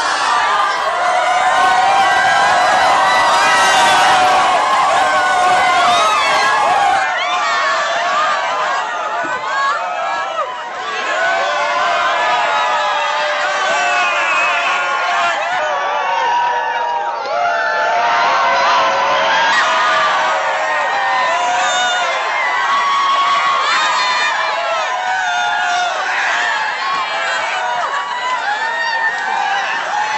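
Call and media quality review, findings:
7.03 s to end: sound turns duller, level drops about 5 dB, new noise roughly 30 dB down. No gap. Likely input switched to a poorer device.

15.59 to 19.53 s: section at the wrong speed, running at 0.864x. Slower and roughly three semitones deeper. Likely playback clocked against the wrong rate.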